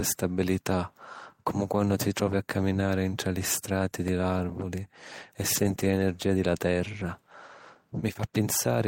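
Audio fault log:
4.08 s and 8.14–8.15 s, block of digital silence: between "caminari ntra li strati" and "l’àrvuli e" the output drops to zero for 2.9 ms, which fits a 128-sample buffer left unfilled, then later for 11.6 ms, which fits a 512-sample buffer. Unlike concealment, nothing fills the hole. The hard edges give a tick, then a second, longer tick or dip.
5.55–5.73 s, 5.79–6.01 s and 6.99–7.05 s, lost packet rebuilt from error correction: after "l’àrvuli e" and up to "di la", about 100 ms and then 120 ms are played from low-bitrate backup copies, and 40 ms near 7.0 s. There is no gap, just a stretch of rougher, noisier sound.
5.75–5.79 s, short concealed packet loss: wedged between the two rebuilt stretches, 20 ms arrived neither on time nor with a backup copy, so the decoder extended the preceding sound and blended back in. It is heard as a brief smear, not coarse coding or a silent hole.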